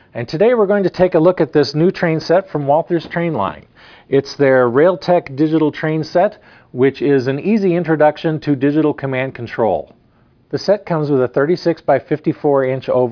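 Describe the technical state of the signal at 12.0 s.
At 12.0 s the signal is intact, with no audible dropout, distortion, noise burst or other fault.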